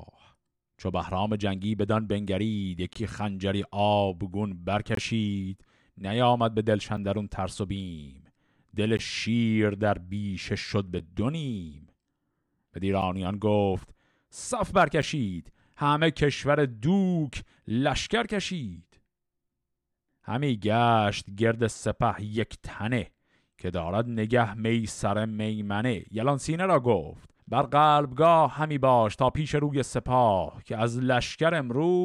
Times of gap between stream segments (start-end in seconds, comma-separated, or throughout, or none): 0.93, 2.93-2.95, 4.95-4.97, 6.97, 8.97, 10.99, 13.02, 15.02